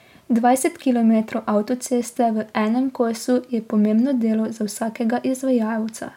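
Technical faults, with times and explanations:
No technical faults can be heard anywhere in the speech recording, and the signal holds steady and continuous throughout.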